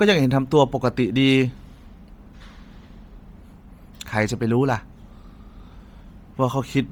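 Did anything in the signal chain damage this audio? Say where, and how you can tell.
Yes, at the codec stage, throughout the speech: the upper range sounds breathy and grainy, with hiss-like texture replacing real detail, though energy extends to about 20.2 kHz. This is likely Bluetooth LC3 compression at a low rate, which fits 32 kbps, noise-filling discarded spectrum.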